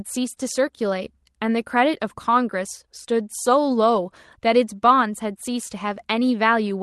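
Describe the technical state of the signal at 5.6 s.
At 5.6 s the speech comes through intact, carried cleanly by the WebRTC call path with no fault at that moment.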